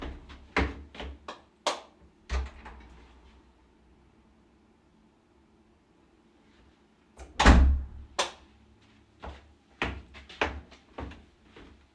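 Nothing stood out on listening to this recording of sounds.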